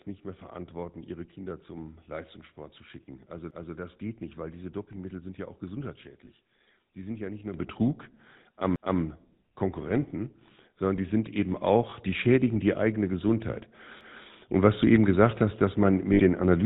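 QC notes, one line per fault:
Throughout: GSM full-rate codec. The speech has gone through the 13 kbps GSM full-rate coder, which rebuilds the vocal tract from a pulse-driven model and drops everything above 4 kHz, so the voice sounds plainly buzzy, gravelly and dull, lacking any top end.
3.51 to 3.76 s, 8.76 to 9.01 s, 14.01 to 14.26 s: overlapping chunks. The audio was handled in 5-second chunks, each starting 250 ms before the previous one finished, so a quarter-second stretch plays twice at every join. It is heard as a regular stutter, the first just before "das geht nicht weil".
6.25 to 6.29 s, 11.90 to 11.93 s, 16.13 to 16.21 s: lost GSM frames. Bad frames were replaced by repeating the last good frame's settings, giving a brief rough, metallic ring, about 20 ms at the first two (the second just before "die schädigen die eigene") and about 60 ms after "gesagt hast dass man".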